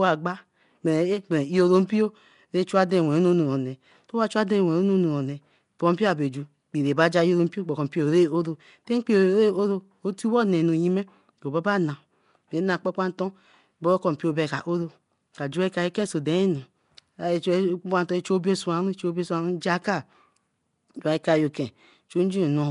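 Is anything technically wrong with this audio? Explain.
Yes, throughout there's a rough, hissy, underwater smear with nothing above 10.6 kHz, likely Nellymoser compression, where starved bands get filled with noise.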